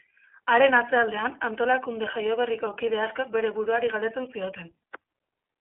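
Speech here sounds thin, muffled and somewhat rough and synthetic all the way through, with nothing heard above about 3.7 kHz and the coding damage plainly audible. The cause is the iLBC codec, a narrowband VoIP coder that encodes the excitation of each frame independently of the one before; the graininess fits 30 ms frames at 13.33 kbps, and the dull top end comes from its telephone-style 300 to 3400 Hz band.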